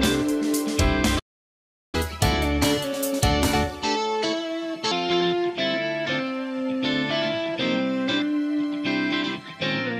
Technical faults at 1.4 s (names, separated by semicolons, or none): playback stall